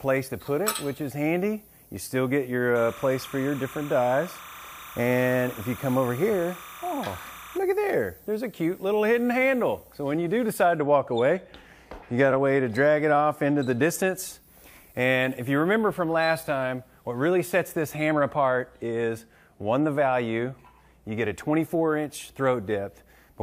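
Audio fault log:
2.76–7.58 s, timecode bleed: a chirpy warble flipping between roughly 1 and 2 kHz, about 20 dB under the sound, which fits 29.97 fps timecode leaking in.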